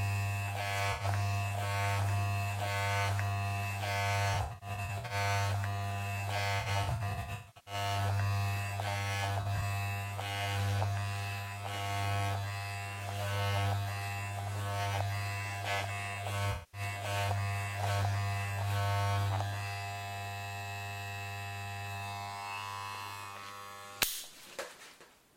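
AAC frame loss with concealment at 0.92, 4.33 to 5.14, 6.60 to 7.74, 9.41 to 9.61 and 16.52 to 16.81 s: the decoder repeats the last good spectrum, which leaves smeared, noisy patches. The 6.60 s stretch has bursts of up to about 150 ms.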